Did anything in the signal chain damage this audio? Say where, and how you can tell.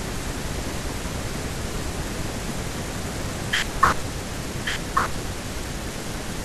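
Yes. Throughout the speech, a second copy of the same audio trails the original by about a second, a few decibels quieter, full-band, with no decay or room colour, so it sounds like a flat, overlapping repeat rather than an echo. This doubled audio track is likely a driver or buffer stage capturing the signal twice through a slower second path, or an edit that left two out-of-step copies mixed together.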